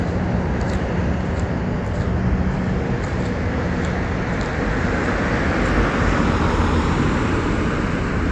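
Nothing is technically wrong with this recording of sounds.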